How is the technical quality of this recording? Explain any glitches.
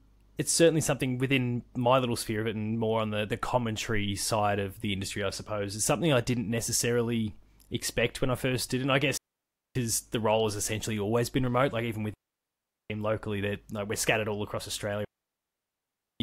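The speech is interrupted three times by digital wireless dropouts: 9.17 to 9.75 s (0.58 s), 12.14 to 12.90 s (0.76 s), and 15.05 to 16.20 s (1.16 s). Each time the receiver lost too much data and muted with a very quick fade, leaving a clean hole of near silence with no noise burst on either side.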